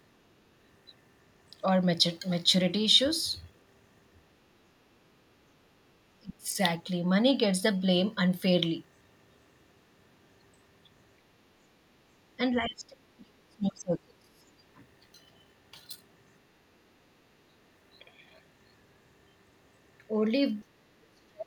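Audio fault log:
6.20–6.57 s, 11.18–11.25 s, 11.64–11.68 s, 11.91–14.63 s and 20.95 s to the end: speech suppressed in double talk. The speech dips sharply, by as much as about 35 dB during the longest stretch, or chops out in brief fragments. This is likely an echo canceller misreading simultaneous talk from both ends as echo and ducking the near talker.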